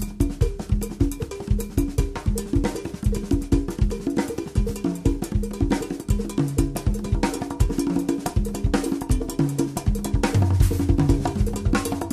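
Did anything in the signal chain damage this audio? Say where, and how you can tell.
No, nothing in the signal chain damaged this audio.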